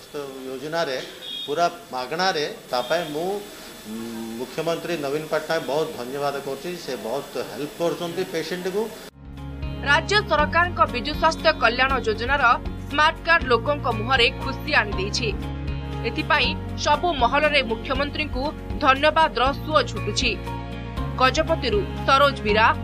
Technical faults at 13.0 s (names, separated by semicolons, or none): none